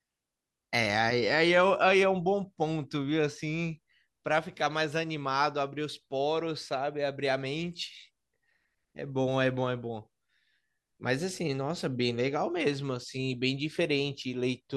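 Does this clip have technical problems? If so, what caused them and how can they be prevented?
No, the speech signal shows no technical faults anywhere in the clip, so there is nothing that needs preventing.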